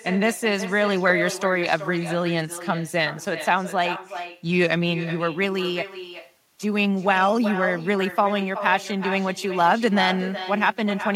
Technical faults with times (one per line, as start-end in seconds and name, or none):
0.00-11.16 echo with no canceller